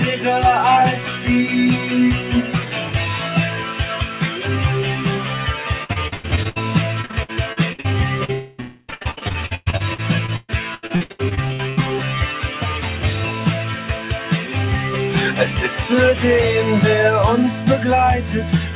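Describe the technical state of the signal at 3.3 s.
At 3.3 s you're hearing the noise suppressor applied to music or sounds, which runs through the whole clip. A speech-tuned suppressor is treating sustained tones, ambience and decay as noise and pulling them down, so attacks come through while whatever holds or rings out sinks by around 5 dB. That gives a pumping, thinning feel. The audio also stops at 4 kHz, which fits a G.711 mu-law call path.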